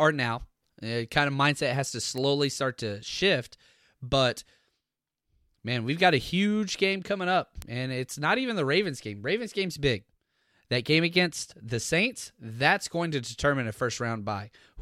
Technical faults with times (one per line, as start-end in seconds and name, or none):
2.18 bit error spike
7.62 bit error spike